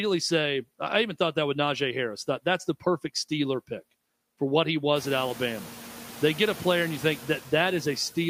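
Noise suppressor artifacts run throughout: the steady noise is cut by about 11 dB frame by frame, sinking between words and resurfacing beneath them, even after the room noise rises around 5 s.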